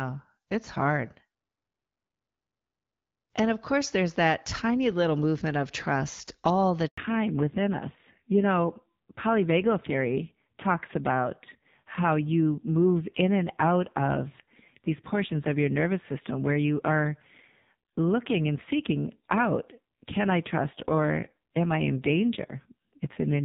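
At 6.88 s, right after "of trust all the", there is a handover gap: the call was passed between networks and no speech frames came through during the switch, so the sound cuts out for about 100 ms and that stretch of speech is lost rather than delayed. The dropout is abrupt, with the level collapsing within a few tens of milliseconds instead of fading naturally, and the silence ends only when the new link begins delivering frames.

From 6.98 s to the end, the call shows fallback to narrowband. Before the switch, the AMR wideband (HD Voice) codec carries the speech with light coding damage, with content reaching up to 7 kHz. Afterwards the new link runs a narrowband codec at a low rate, which fits AMR-NB at 5.9 kbit/s. Nothing above 4 kHz survives, so the upper part of sibilants and consonant detail is lost, and the speech turns dull, boxy and somewhat rough.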